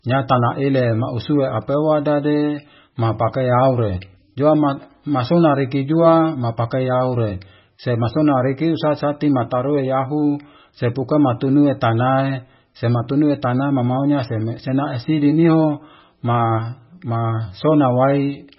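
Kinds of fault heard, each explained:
MP3 compression: The speech is likely heavily compressed with MP3, and the encoder ran so short of bits that it cut the treble and dropped quiet frequency detail throughout, which fits a very low bitrate near 16 kbps. Nothing survives above 5.6 kHz, so s sounds lose their edge and the sound turns watery and swirly. A spectrogram shows a flat ceiling at 5.6 kHz and speckled patches flickering on and off below it, while the waveform shows smeared onsets.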